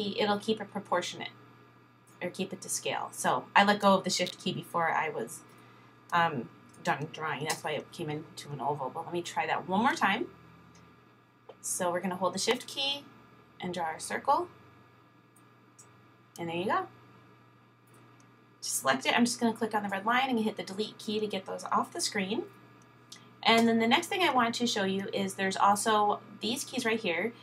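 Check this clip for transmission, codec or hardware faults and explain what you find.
Two sharp clicks stand out. From 4.27 to 4.30 s and again at 12.51 s there is a brief snap riding on top of the sound, peaking around -20 dBFS. This is likely an electrical switching spike, where a nearby switch or discharge arcs and the audio line picks it up.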